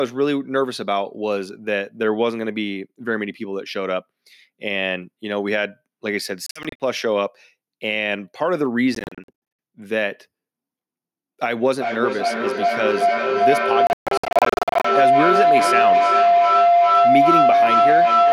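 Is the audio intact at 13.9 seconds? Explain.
No. A feedback howl runs from 11.77 s to the end: the microphone-to-loudspeaker loop gains level each trip, building a tone near 700 Hz, with the loop repeating about every 0.4 s, up to about 6 dB above the speech. From 13.87 to 14.85 s, brief silent holes totalling about 0.61 s, the longest 0.14 s, chop the sound, likely a Bluetooth dropout where late packets were discarded.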